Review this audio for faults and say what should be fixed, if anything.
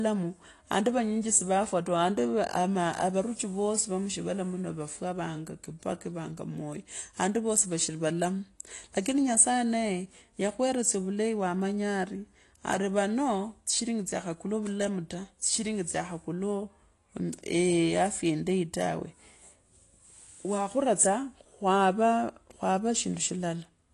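Throughout, the speech was likely passed through AAC compression at a low bitrate, consistent with AAC-LC near 32 kbps, leaving nothing above 12 kHz and dull, smeared, warbling sibilants. Encode at a higher bitrate, or keep an uncompressed master for delivery.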